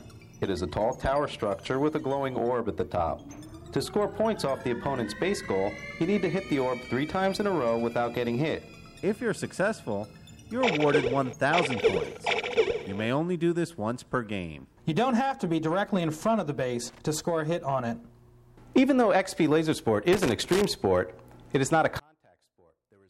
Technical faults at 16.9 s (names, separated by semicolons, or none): loose connector crackle